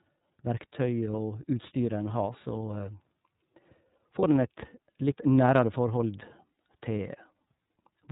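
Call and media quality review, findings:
iLBC codec throughout: band-limited to 4 kHz, rough, slightly synthetic speech. Harshness points to 30-ms-frame iLBC mode (13.33 kbps), not generic low-pass filtering.

Lost iLBC frames at 1.11 s and 4.19 s: brief held buzzy vowel, about 30 ms each. Decoder concealment repeats the pitch cycle, unlike a dropout's silence, and recovers immediately.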